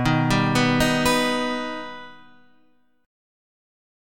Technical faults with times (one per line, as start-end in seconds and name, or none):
none